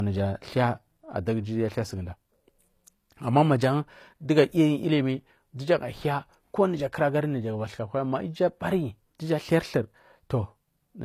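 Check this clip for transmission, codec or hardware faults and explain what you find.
One fault runs throughout the speech: low-bitrate audio saved at a high bitrate. Everything above 14.9 kHz is missing, likely because a low-bitrate encode was re-saved as high-bitrate MP3.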